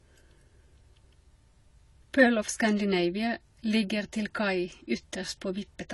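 Throughout the speech the sound is dull and smeared, with nothing above about 11.5 kHz, so sibilants lose their air and take on a fizzy, warbling texture where the spectrum thins out. The damage is plainly audible from start to finish. This points to AAC compression, likely AAC-LC at a low rate around 32 kbps: the encoder lowers its cut-off and quantises each frame's frequency lines so coarsely that bands drop out or smear together.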